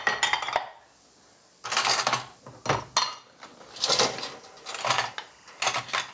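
Gain pumping runs through the whole of this recording of everyday sounds, with a swing of around 15 dB, so loud and quiet moments sit unnaturally close in level and the sound feels squashed. The likely cause is a microphone gain set far too high, with a fast limiter or compressor clamping down on every peak and releasing in the pauses. Timecode bleed appears from 4.77 s to the end at 6.13 s as a faint chirping warble well below the main sound, alternating between pitches near 1 and 2 kHz. That pattern is linear timecode, a square wave running at 23.976 frames per second, leaking in from an adjacent track or cable. The call-style microphone processing, which leaves nothing above 8 kHz, is a limit of the chain rather than a fault.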